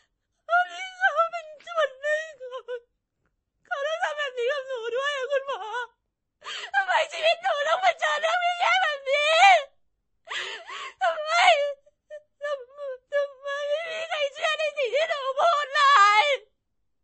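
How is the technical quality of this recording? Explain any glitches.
The quality is poor throughout: the speech sounds dull and watery, with nothing above 8.3 kHz and swirly, chirping s sounds, likely from MP3 compression at a low bitrate around 32 kbps.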